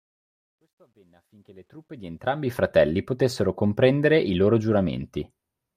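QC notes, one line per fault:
0.00–2.56 s, truncation distortion on a fade: the fade-in passes through a gain stage that keeps too few bits and adds no dither, which fits about 12-bit resolution. At low levels the waveform collapses into a few coarse square steps, so the rising sound is gritty, worst from 0.00 to 1.33 s. The grit clears as the fade-in completes at 2.56 s, just before "potessero comprendere i loro".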